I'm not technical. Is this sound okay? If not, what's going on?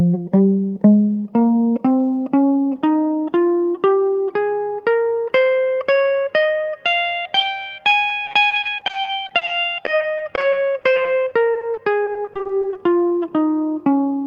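No. Twice, from 8.25 to 9.49 s and from 9.85 to 12.77 s, the connection kept dropping bits of audio. That is repeated packet loss (robotic sound). Each dropout, up to 40 ms, was patched by stretching the previous sound, so the music turns choppy, with pieces missing.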